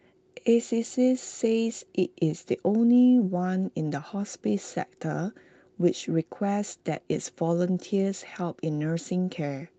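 No technical faults can be heard in this speech. It has gone through a working call path, with the top end ending at 8 kHz and the usual coding texture, which fits an Opus stream at about 32 kbps.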